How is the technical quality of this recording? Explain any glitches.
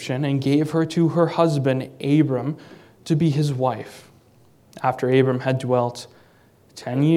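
No glitches can be heard in this recording. There is nothing here that calls for an explanation.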